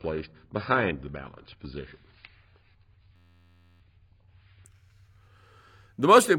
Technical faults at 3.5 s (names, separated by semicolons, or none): adaptive stream starting at a low bitrate; system hang loop